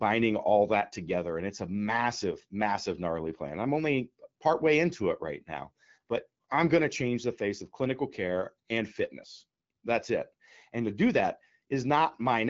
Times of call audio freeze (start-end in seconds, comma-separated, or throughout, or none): none